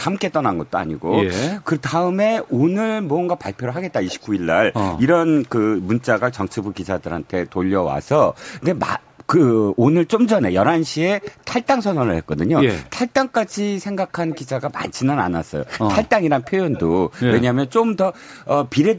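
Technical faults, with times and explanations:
0.31 to 9.15 s, 10.83 to 11.67 s, 12.85 to 14.41 s and 15.65 to 17.73 s: echo leak. There's a second copy of the speech trailing it by around 113 to 119 ms. It's very quiet through the long first stretch, roughly 30 dB under, then noticeably louder in the later three, about 15 to 20 dB down. That's likely a far end on loudspeaker whose echo canceller didn't fully scrub what its mic picked up, so the leftover came straight back down the line.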